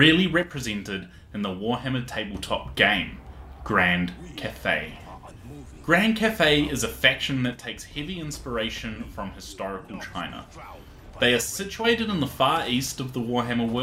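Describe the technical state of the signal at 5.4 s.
At 5.4 s the signal is intact, with no dropout, clipping, glitch or other fault audible at that point.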